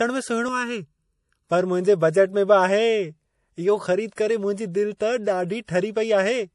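Throughout, the sound is likely MP3 compression at a low bitrate, consistent with about 48 kbps. Short of bits, the encoder drops weak frequency lines frame by frame and removes everything above 11.4 kHz, leaving plainly audible watery, swirling artefacts and dulled, smeared sibilants and attacks.

From 0.48 to 1.48 s, channel delay (comb filtering) occurs: one channel arrives a fraction of a millisecond late and is summed with the other to mono. Shared content cancels at evenly spaced frequencies, with the first notch near 700 Hz, so the sound turns hollow and phasey.

Pre-echo appears at 4.16 s, 4.97 s and 5.65 s. The codec spreads quantisation noise across each block, so noise meant for a sharp attack leaks into the quiet just before it, over 21, 32 and 37 ms respectively. Each attack is preceded by brief hiss and sounds softened.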